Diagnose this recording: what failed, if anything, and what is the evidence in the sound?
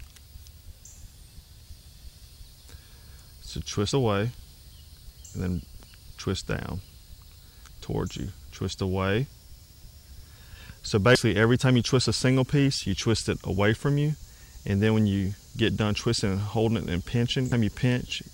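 The codec stage is where this went wrong: damaged data in a compressed stream. Three very short glitches land at 3.92, 11.15 and 17.52 s. At each one bad data throws the decoder off, and it loses sync and hunts for the next frame header, which leaves a brief blip in the sound.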